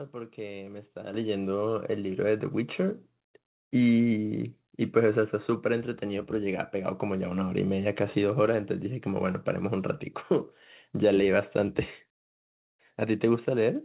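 A speech clip with a microphone volume step-up at 1.14 s. The level jumps by about 8 dB almost instantly. Voice and background noise rise together, so the room sound gets louder at the same moment as the speech. That shared jump points to the input gain, not the talker. Call software judged the microphone too quiet and raised the device volume in one step. The band stops at 4 kHz throughout, which fits a G.711 mu-law call codec.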